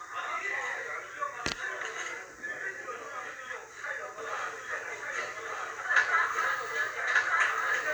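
From 4.18 s to the end there's a doubled audio track: a second, equally loud copy trails about a second behind, dry and abrupt, likely from a slower capture path.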